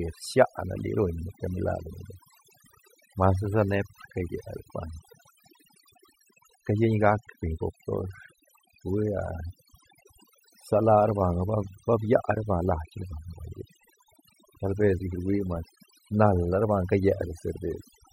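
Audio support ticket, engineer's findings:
Overdone noise removal, throughout. Noise reduction stage set too aggressive: per-band gain drops bands near the noise estimate to near zero, taking low-level speech detail with them. Result: background gated to near silence with twinkling specks of residue; voice lacking its quieter components. Probable component: denoiser in the capture or post chain. Fix: reduce reduction depth.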